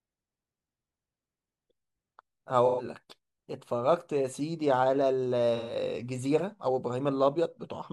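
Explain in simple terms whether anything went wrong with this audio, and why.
AAC frame loss with concealment occurs at 2.66–2.85 s and 5.55–5.75 s. In each, about 128 ms of lost data (likely three frames) becomes a brief smeared, hissy patch rather than the clean silence of a dropout.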